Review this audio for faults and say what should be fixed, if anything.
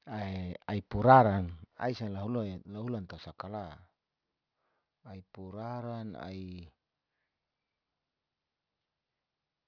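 Aliasing runs throughout the speech, folding energy above about 5.5 kHz back down as faint gritty, metallic sibilants, which fits an unfiltered downsample to 11 kHz. To prevent it, apply a steep anti-aliasing low-pass below the new Nyquist frequency before reducing the sample rate.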